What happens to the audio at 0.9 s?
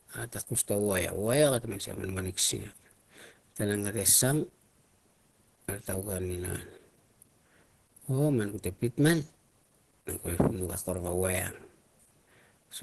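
At 0.9 s you're hearing the same Opus compression damage that runs through the whole clip. Nothing survives above about 12.2 kHz, and the speech sounds muffled and hoarse, which fits a low-bitrate encoder, likely around 16 kbps, dropping into its hybrid speech mode.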